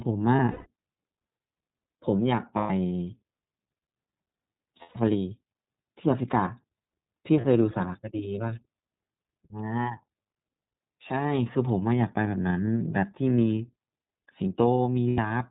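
The whole thing runs through the iLBC codec, and you can plainly hear it. Nothing gets through above 4 kHz, so the speech sounds boxed-in and a bit rough and synthetic. iLBC codes each frame's excitation on its own, and the slightly grainy texture fits its 30 ms frame mode at around 13.33 kbps. That damage sits under everything, start to finish.

On top of that you get lost iLBC frames, five spots in all. The first is messy, from 0.36 to 0.68 s, with dropouts scattered over about 300 ms and the longest stretch around 150 ms. Then there are clean gaps of 120 ms at 2.57 to 2.71 s and at 4.82 to 4.96 s, a short 30 ms blip at 7.41 s, and 90 ms at 15.09 to 15.19 s. In each gap the decoder repeats the last pitch cycle mixed with noise, so you hear a held, buzzy, breathy vowel. Since the frames stand alone, the speech snaps back right after each one.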